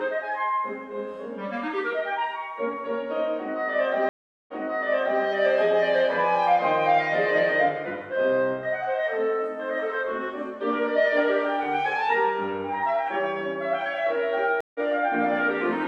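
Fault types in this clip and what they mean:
Stream reconnect: a dropped connection forces a fresh decoder. At 4.09 s, silence, then replay from 0.74 s earlier. At 14.61 s, a brief gap skips ahead.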